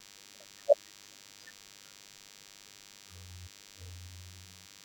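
From start to finish there's a DECT cordless phone buzz sitting under the speech. A nearby handset or base is firing radio bursts 100 times a second, and the audio circuitry rectifies them into a thin, steady 100 Hz buzz full of harmonics, roughly 15 dB below the voice.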